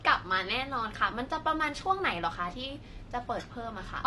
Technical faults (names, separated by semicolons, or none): AAC compression